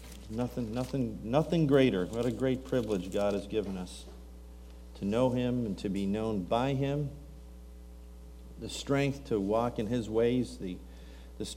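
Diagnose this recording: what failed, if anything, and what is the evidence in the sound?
Nothing failed; no faults heard.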